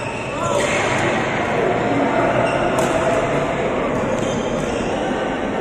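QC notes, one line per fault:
3.90–4.92 s drift correction step: playback runs 5.5% slow and 98 cents flat, nearly a semitone, for about one second, with speed and pitch dropping together. This is likely a clock-matching resampler changing its rate in one step to refill or drain its buffer.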